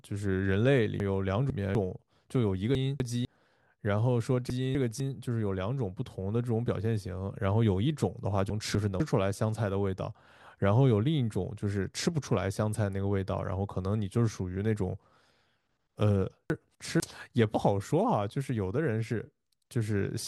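Chunks out of order jumble the speech at 1.0–1.75 s, 2.75–3.25 s, 4.5–5.0 s, 8.5–9.0 s and 16.5–17.0 s. Each time, a 250 ms chunk plays late, after audio meant to follow it, so the sound scrambles briefly.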